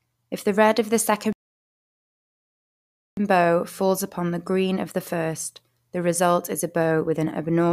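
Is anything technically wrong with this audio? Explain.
Yes. A rebuffering stall occurs from 1.33 to 3.17 s: after "the red of the" the speech drops to silence, then resumes intact at "bow falls upon the". The player exhausted its downloaded audio and waited, inserting about 1.85 s. The waveform goes flat and the spectrogram shows an empty vertical band.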